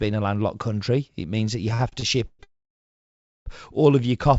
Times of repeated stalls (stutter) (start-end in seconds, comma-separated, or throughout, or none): 1.74-2.41